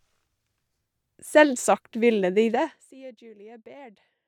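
From 2.52 to 2.94 s, right after "ville de", the speech is pulled down by roughly 25 dB with zipper noise: the gain drops in unsmoothed 2 dB steps, around 40 a second, and each jump leaves a tiny click. Together they form a fast ticking buzz riding on the speech while the level falls. A smooth fader-style level change would glide down silently over a similar span, whereas here the staircase of clicks gives the steps away.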